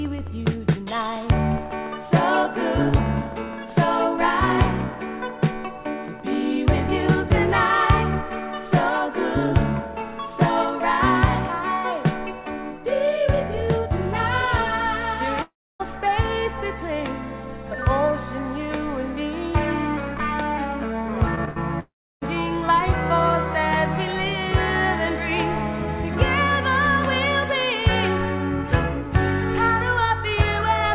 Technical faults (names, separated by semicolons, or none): long network dropout; short concealed packet loss; burst of packet loss